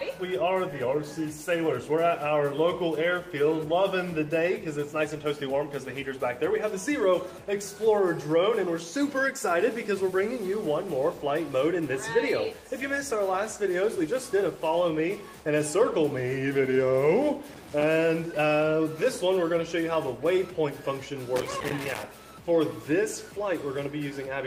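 At 17.53 to 17.83 s and again at 21.36 to 22.03 s there is loose connector crackle: a worn or dirty contact repeatedly breaking and remaking as it shifts, chopping the signal into an irregular burst of crackle and scratching.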